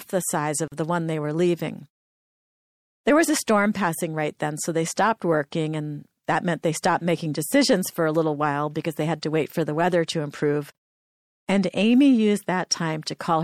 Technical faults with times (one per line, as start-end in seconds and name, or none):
0.00-13.43 MP3 compression
0.68-0.72 gap at a join of encoded pieces
10.72-10.75 gap at a join of encoded pieces